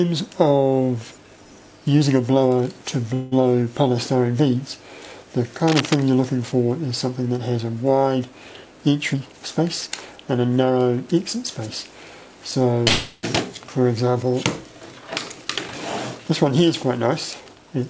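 From 3.14 to 3.34 s there is a call audio freeze. Packets were likely held up in transit, so the jitter buffer ran dry and the receiver stretched the last sound into a fading buzz or hiss for about 0.18 s without dropping into silence. When the packets arrived, the audio resumed where it had stopped, so nothing is lost, but a gap is inserted and everything after it is delayed by that amount.

At 5.68 to 5.98 s comes cable scratch noise. The cause could be a worn cable, connector or DC-carrying control being moved, making its contact resistance jump about. It adds dense, uneven bursts of noise at about 5 dB below the signal, heard as a short scratching or rustling over the sound.

From 9.13 to 10.71 s there is a jitter buffer speed-up. The buffer had built up more audio than its target, so the receiver repeatedly cut out pitch-period-sized pieces, removing around a fifth of a second in total. 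The audio runs at 111% speed with unchanged pitch and sounds hurried.

A second call audio freeze runs from 12.88 to 13.25 s. This time the fill lasts about 0.35 s, again fading without reaching silence, and again nothing is missing. It adds a longer gap and a larger delay.

A second jitter buffer speed-up runs from 16.15 to 17.63 s at 109%, trimming roughly 150 ms. It is again audibly rushed at the same pitch.

Throughout, nothing sounds above 8 kHz, which is consistent with a wideband call codec.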